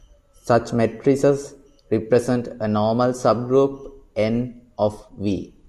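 No technical faults are audible anywhere in the speech recording.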